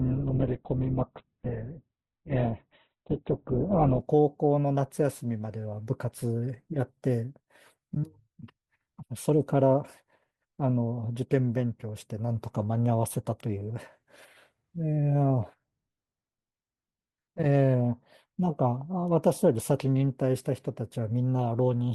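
An adaptive stream starting at a low bitrate affects this speech clip from 0.0 to 4.0 s. Nothing sounds above about 4.2 kHz and codec artefacts are stronger, which points to Opus near 8 kbit/s, until the player steps up, roughly 64 kbit/s, with no gap.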